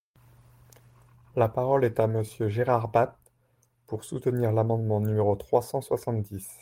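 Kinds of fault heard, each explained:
Nothing stood out on listening to this speech recording.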